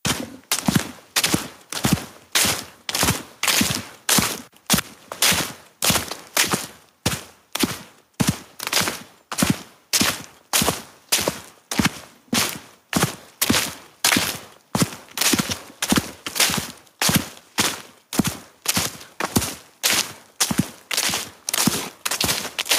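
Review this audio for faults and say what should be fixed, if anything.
There's gain pumping running right through this recording of everyday sounds. The level keeps getting pulled down when something loud happens and then creeps back up afterwards, with the gain swinging by around 10 dB. That squashes loud and soft moments closer together. The likely cause is input gain set far too high for the mic, with a fast limiter or compressor clamping down on each loud hit. To prevent it, back the input gain off so the loud sounds sit comfortably below the limiter's threshold, and let any compression happen gently afterwards.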